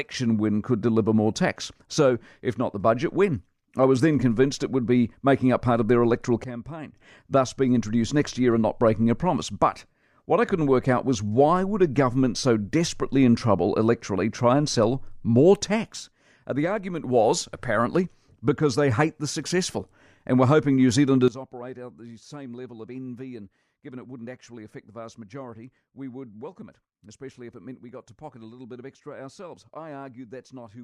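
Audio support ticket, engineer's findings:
Sudden gain jump, three drops: about 15 dB, 6.44–6.96 s; about 6 dB, 15.92–17.04 s; about 18 dB, 21.28 s to end. Waveform envelope and noise floor step together, edges square. Likely unramped digital gain change.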